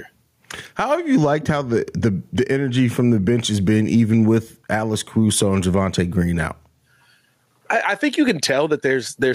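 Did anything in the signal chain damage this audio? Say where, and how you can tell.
Yes. Gain pumping runs through the whole clip: the gain swings by around 10 dB, leaving the speech squashed. The likely cause is input gain set far too high, with a fast limiter repeatedly clamping it.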